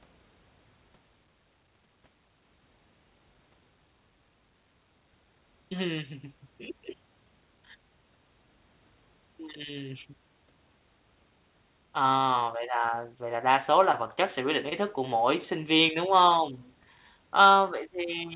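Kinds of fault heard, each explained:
Short concealed packet loss: About 20 ms of audio failed to arrive in time, twice. Each time the receiver patched the gap by extending the preceding sound, then blended back. Both show as brief smears, at 13.92 s after "là đa số là" and 14.69 s after "chất sẽ quyết định".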